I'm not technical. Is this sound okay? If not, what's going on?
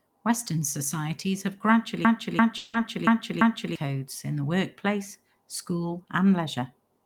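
No. From 2.05 to 3.76 s there is a system hang loop: the computer froze while the sound hardware replayed the same third-of-a-second piece five times, about three times a second. It's a stutter of exact repeats, not a fade, and roughly a second and a half of speech is lost.

Inside that stretch, from 2.57 to 2.75 s, there's a long network dropout, likely from audio not arriving in time. For about 0.16 s the gap is filled with a fading buzz or hiss rather than repeats or silence, and that part is missing afterwards.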